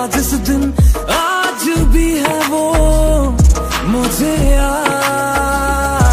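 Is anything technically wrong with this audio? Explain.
No, nothing stood out as technically wrong on listening.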